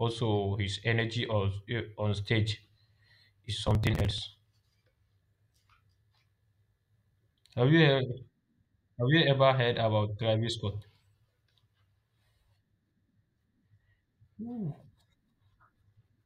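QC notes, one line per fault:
3.66–4.18 s, processor overload crackle: for about half a second the speech turns gritty and torn. The system is falling behind on its audio buffers, and the skips are short enough to suggest buffers of around 5 ms, with something like thirty deadlines missed. Each missed buffer is skipped rather than filled, so the audio jumps with a hard edge. Packed this closely, the edges merge into a continuous crackle that stops once the load clears.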